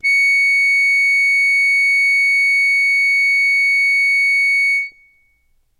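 From about 0.06 s to 0.82 s, the music's loudest peaks pick up a brief crackly edge. This is hard clipping: the signal runs roughly 1 dB past what the stage can pass, so peaks are sliced flat, adding high harmonics.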